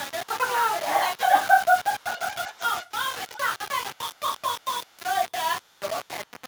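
Grainy, rough distortion sits on the speech from start to finish, with the grit rising and falling with the voice. Quiet tails drop to silence or sputter rather than fading smoothly, and the error sits only about 10 dB below the speech. This is likely low bit depth without dither: the coarse steps fit roughly 5 bits, with samples rounded to the nearest step, so the error tracks the signal instead of spreading out as a steady hiss.

A faint delayed copy of the speech trails it by 369 ms, at 1.99 to 2.91 s, 3.13 to 3.51 s, 3.95 to 4.2 s, 4.38 to 4.42 s, 4.6 to 4.65 s, 4.85 to 4.99 s, 5.62 to 5.8 s and 6.26 to 6.41 s. It is clearest in the first stretch, around 15 dB down, and sinks to roughly 35 to 40 dB down later, surfacing as brief scraps. This is likely echo leak: a loudspeaker's output reached a microphone, and an echo canceller let part of it back.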